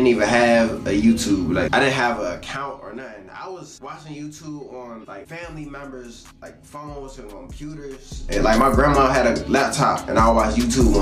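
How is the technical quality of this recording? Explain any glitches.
The recording has two stretches of zipper noise where the level moves in audible steps.

From 1.8 to 3.08 s, the level falls about 20 dB in 1 dB steps, around thirty per second. Each unsmoothed jump clicks, giving a fine ticking. It shows as a staircase envelope and faint vertical lines on a spectrogram.

From 8.08 to 8.44 s, the level rises about 20 dB in coarser 2 dB steps, so the zipping is sharper and the staircase more pronounced.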